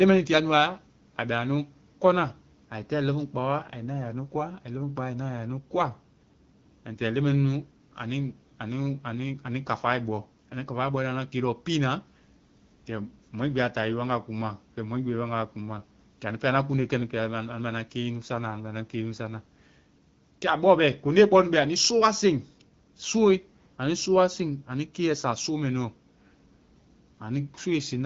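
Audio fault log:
No faults heard in this speech.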